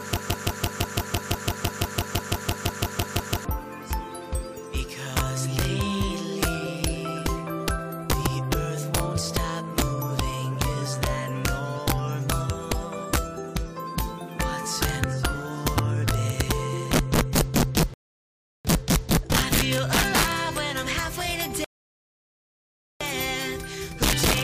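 From the very start the clip is already caught in a broken-record loop: a fragment of about 168 ms repeats exactly, back to back, 19 times, until 3.45 s. The player or stream likely stalled and kept re-sending the last piece it held, so the audio that belonged in those seconds is gone. Unlike a rebuffering stall, there is no silence and no clean resumption. A stuttering, mechanical repetition stands in for the missing audio.

Throughout the clip there is integer overflow. The signal is driven about 5 dB past full scale, and instead of being limited, the loudest peaks wrap around to the opposite sign. Only a small share of samples, around one or two percent, cross the limit, but each one jumps across the entire range. The result is violent, sharp cracks on loud moments. They are much harsher and more sudden than clipping, which would merely flatten the peaks into a duller distortion.

Two rebuffering stalls follow, from 17.94 to 18.65 s and from 21.64 to 23.01 s. 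They add about 0.71 s and 1.36 s of dead air. In each case the player ran out of downloaded audio and waited for more. The sound drops to silence and then picks up exactly where it stopped, so nothing is lost and only time is added. That clean pause separates them from the opening loop, which repeats a fragment and discards what should have played.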